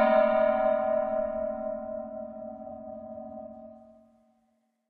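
At 2.67 s the audio jumps forward by roughly a third of a second. This is compressed frames skipped: about seven whole frames were never decoded, either missing or rejected as damaged, so that stretch of sound is simply gone. The jump fits frames of about 46 ms. Unlike a dropout, there is no silent gap.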